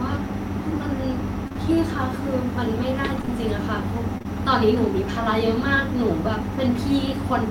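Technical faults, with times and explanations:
1.47 to 1.57 s, short concealed packet loss: two 20 ms packets in a row never arrived, so the decoder carried on from the last bit of speech and blended back, giving a quick smear.
3.18 s, lost packet rebuilt from error correction: a single 20 ms packet went missing, but the next one carried a low-bitrate spare copy, so there's no gap. That frame is rougher and noisier.
3.22 to 3.30 s, short concealed packet loss: another pair of back-to-back 20 ms losses right after that rebuilt frame, papered over by extending the previous sound, so a short wobble.
4.18 to 4.26 s, short concealed packet loss: same again, two consecutive 20 ms holes filled by continuation, heard as a brief smear.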